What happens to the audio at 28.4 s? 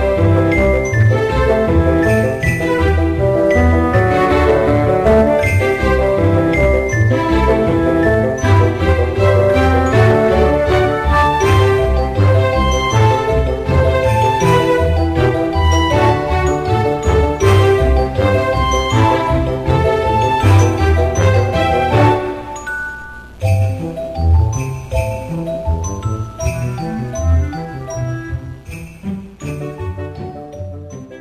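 Nothing goes wrong at 28.4 s; the audio plays through that moment intact, with no dropout, click or other fault.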